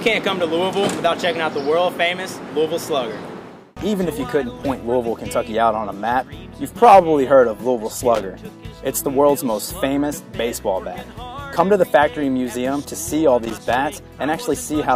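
At 8.15 to 8.23 s, and again from 13.43 to 13.75 s, a loose connector crackle breaks into the audio: an irregular burst of scratchy crackle, the second longer at about 0.32 s. A worn contact is making and breaking as it shifts, chopping the signal on and off and popping with any DC on the line. Its ragged, uneven texture separates it from the single clean click of a digital glitch or a tidy dropout.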